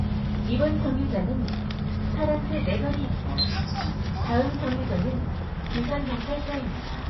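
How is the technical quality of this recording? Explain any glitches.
The technical quality is poor, with plainly audible damage throughout.

MP3 compression, from start to end: nothing survives above 5.8 kHz, and weak frequency components flicker in and out, giving a watery, swirling texture with smeared onsets. This is likely a starved MP3 encoder, consistent with a very low bitrate around 24 kbps.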